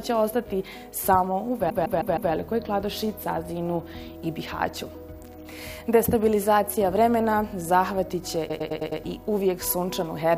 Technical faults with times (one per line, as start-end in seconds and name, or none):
1.69-2.31 repeated frames
8.48-9.00 repeated frames